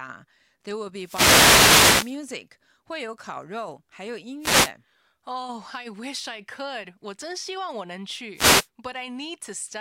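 At 1.0 s a wireless microphone noise hit sweeps in and lasts until about 2.2 s. It is heard as a swish of static over the speech. The FM radio link from the microphone is fading as reflected signals cancel the direct one. Receiver noise rises to fill the gap. Two shorter hits follow. One runs from 4.40 to 4.72 s, just after "肉还有音". The other runs from 8.34 to 8.68 s, right after "希望我能".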